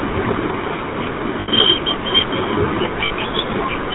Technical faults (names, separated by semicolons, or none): GSM full-rate codec; lost GSM frames